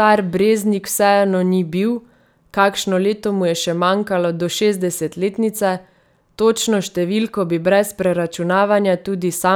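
Listening to this speech recording, nothing stood out as a technical problem at any point.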